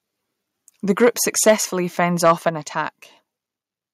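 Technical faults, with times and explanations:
1.03–1.08 s, 1.47–1.53 s and 2.25–2.32 s, microphone overload: brief harsh crackle on the loudest peaks, likely from input gain driving the converter about 2, 6 and 5 dB past full scale. The waveform shows flat-topped peaks, and the spectrogram shows broadband vertical smearing.
1.50 s and 2.49 s, microphone volume stepped down: the sound and its background drop abruptly, by about 3 and then 5 dB, likely the call software cutting input gain after the clipped peaks. The waveform envelope shrinks in one step, and the spectrogram dims evenly across all frequencies.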